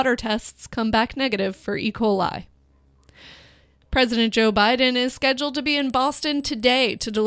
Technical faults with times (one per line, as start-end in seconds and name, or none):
5.80-7.27 resampler restarted on every block